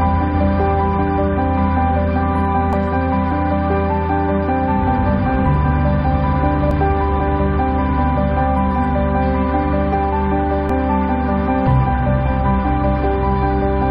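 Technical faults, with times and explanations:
2.73 s, 6.71 s and 10.70 s: overlap between stream segments. At each of these spots a little click or tiny skip pops out, about 4 s apart, which fits 4-second segments. Neighbouring chunks carry time stamps that claim the same stretch, so the player trims the overlap away. That audio was never actually duplicated, so roughly 12 to 16 ms of real sound disappears and the waveform jumps across the gap, which you hear as a tiny skip.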